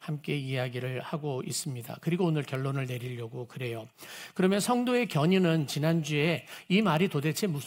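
Bit error spikes at 1.64 s, 2.55 s and 6.97 s: a flipped bit throws one or two samples a power of two off before they snap back, each heard as a single sharp, broadband tick.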